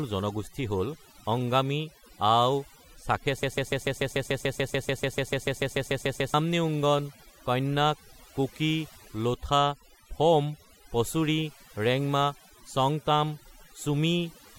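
A speech recording with two faults. Overdone noise removal, a noise reduction stage set far too strong, pulls bands near the noise estimate down throughout, leaving a lowered, twinkling background. A broken-record loop, likely from a stalled player or stream resending its last fragment, repeats a 146 ms piece twenty times from 3.43 to 6.34 s, losing the intended audio.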